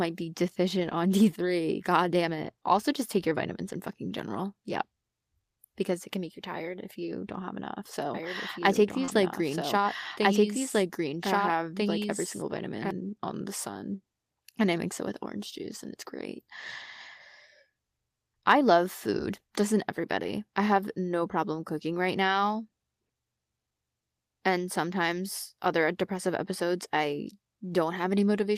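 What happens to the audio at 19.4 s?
Nothing goes wrong at 19.4 s; the speech carries on intact through that moment, with no dropout, click, distortion or other fault to be heard.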